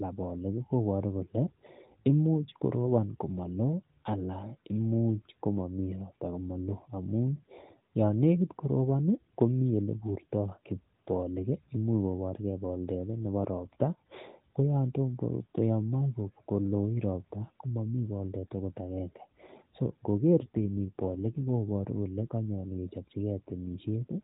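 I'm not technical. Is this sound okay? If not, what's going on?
No. From 20.4 to 21.4 s the speech turns rougher and more robotic, then recovers. This is an AMR rate drop: the phone network briefly squeezed the call into fewer bits.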